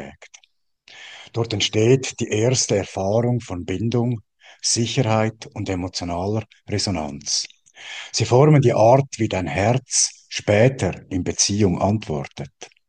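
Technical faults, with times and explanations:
No technical faults can be heard anywhere in the signal.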